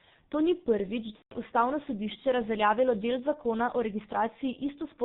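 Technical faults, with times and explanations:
Throughout, G.723.1 codec: the speech sits behind a heavy narrow-band veil. Nothing makes it past 4 kHz, so the top end is simply gone and consonants smear into each other. At around 6.3 kbit/s with 30 ms frames, the codec's model of the voice catches up slowly, which gives that hoarse, muffled quality and makes quick transitions sound blurred rather than crisp.
1.16 to 1.34 s, VoIP packet loss concealed by the speech codec: about 150 ms of audio went missing, which fits five 30 ms frames, and the decoder covered the gap by guessing. It kept repeating its last pitch and filter settings while turning the level down, so you hear a stretched buzzy tone or coloured noise that fades out. Each frame builds on the one before, so the voice comes back weak or distorted rather than snapping straight back.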